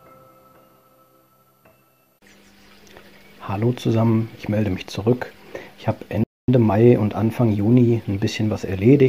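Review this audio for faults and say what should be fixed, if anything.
A playback stall cuts the sound at 6.24 s. Output stays silent for 244 ms and resumes at 6.48 s. The player likely ran out of buffered data or had its thread blocked. A deeper playback buffer and an unblocked audio thread would prevent it.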